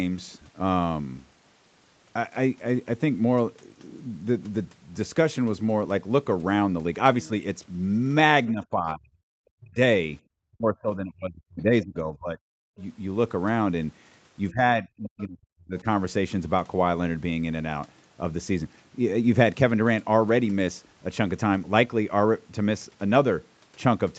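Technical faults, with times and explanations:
8.52–9.12, 9.56–9.79, 10.52–12.81, 14.50–14.64 and 14.80–15.86 s: speech suppressed in double talk. The speech dips by up to about 40 dB (about 15 dB at 14.50 s), likely because the echo canceller turned the microphone down while the far side was talking. This is a level cut, not a second voice.
15.03–15.24 s: other side's voice leaking through. A faint extra voice sits about 25 dB below the speech, likely loudspeaker echo the canceller missed. It adds sound rather than removing it.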